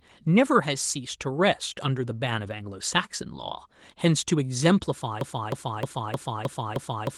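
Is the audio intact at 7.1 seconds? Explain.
No. From 5.21 s to the end, the stream or player likely stalled and kept resending the last fragment it held, a broken-record loop. A 0.31 s slice repeats exactly, back to back, six times, so 7.1 s plays stuck looped audio instead of new material.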